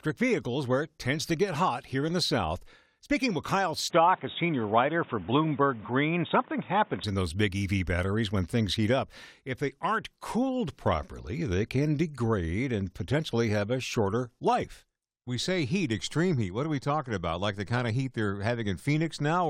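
Speech, where from 3.9 to 7.04 s the sound turns dull, with nothing above 3.8 kHz and a new noise floor about 30 dB below it, starting just before "in those big". The likely cause is an input switched to a poorer device. A plain filter wouldn't bring its own background noise.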